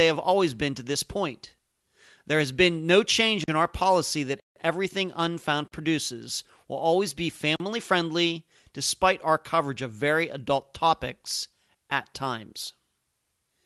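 The speech drops into a block of digital silence four times: 3.44 to 3.48 s, 4.40 to 4.56 s right after "in our policy that", 5.68 to 5.72 s just before "produces will always be", and 7.56 to 7.60 s between "produces will always be" and "friendly despite our coverage". Each time the audio cut to silence with no fade. The 40 ms gaps sound like short dropouts, and the 160 ms one is an audible hole. The waveform shows flat silent stretches with abrupt edges. The spectrogram shows blank columns.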